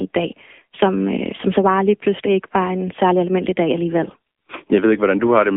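From start to end, the speech shows AMR narrowband mobile codec damage. Sound is held between 200 Hz and 3.5 kHz, with nothing above 3.7 kHz. The coder rebuilds the voice from a vocal-tract model and sparse pulses. It sounds plainly buzzy and synthetic, which fits a low mode near 8 kbps.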